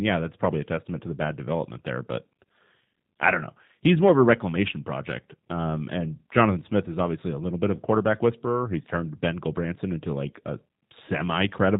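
Throughout the speech, the sound is plainly rough and synthetic, with nothing above 4 kHz, marks of G.729 coding at a rate that fits 8 kbit/s. The codec rebuilds each 10 ms frame from a vocal tract filter, a pitch predictor and a few pulses, discarding finer detail.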